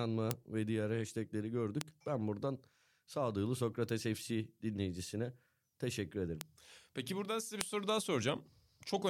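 Sharp isolated ticks, bit error spikes, land at 0.31 s just before "ve diğer hashtagleri", at 1.81 s, at 3.89 s after "buradan sağduyulu", at 6.41 s, and at 7.61 s between "buradan size bir" and "soru daha". A flipped bit throws one to three samples out by a power of two, peaking near about -10 dBFS at the loudest and about -28 dBFS at the quietest. Unlike a dropout or edit click, the sound around each tick is intact, and the broadband snap bears no relation to the speech.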